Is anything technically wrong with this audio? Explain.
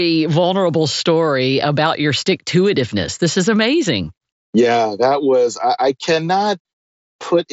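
No, nothing is technically wrong with this audio.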